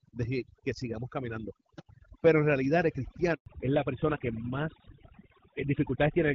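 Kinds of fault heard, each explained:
Overdone noise removal: A noise reduction stage was pushed too hard across the whole clip. It cuts individual frequency bands deep whenever they sit close to its guess of the noise floor. Quiet parts of the speech are removed along with the noise. The background drops and breaks up into small twinkling specks. The speech has soft endings and weak consonants thinned out.
Handover gap: At 3.34 s, right after "pero en realidad el", the call switched between networks and no speech frames came through. The speech fades out within a few tens of milliseconds. Silence then holds for about 120 ms, until 3.46 s, when the new link starts carrying audio. Whatever was said in that window is gone. It is a clean hole, not a burst of noise.
Fallback to narrowband: From 3.46 s, directly after the same gap following "pero en realidad el", the call drops out of wideband coding. 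Before this point the audio has the light coding of HD Voice, which fits AMR-WB at 12.65 kbit/s. Afterwards nothing is left above 4 kHz, through to the end. The speech turns duller and rougher. This points to an older narrowband codec such as GSM full rate.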